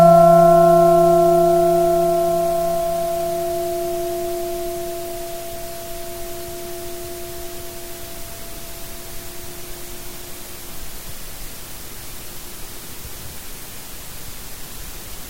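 No faults audible at any point in the recording.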